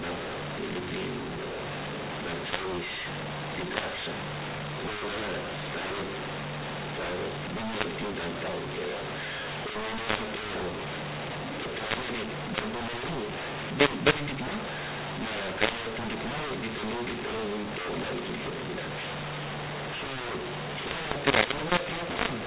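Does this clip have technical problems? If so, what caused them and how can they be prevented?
Yes, a mu-law and A-law mix-up runs the whole way through. The speech was coded as mu-law but decoded as A-law, so levels get scrambled, voices turn harsh, and pauses fill with hiss. The telephone-band G.711 coding itself sounds right, topping out near 4 kHz. To prevent it, make sure the decoder's companding law matches the encoder's.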